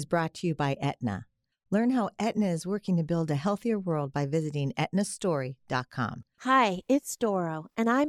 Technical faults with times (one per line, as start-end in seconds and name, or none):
none